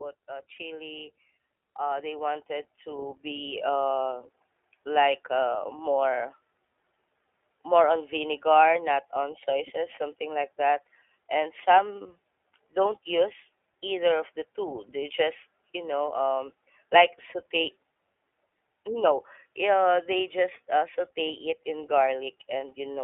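iLBC codec, throughout: the speech is confined to about 300 Hz to 3.5 kHz and sounds plainly rough and synthetic, as each frame's excitation is coded independently at what sounds like iLBC's 15.2 kbps mode.

Lost iLBC frames, 0.56 to 0.59 s: a single packet, about 20 ms, goes missing. The decoder fills it by repeating the last pitch cycle with noise, giving a brief buzzy hold before clean recovery.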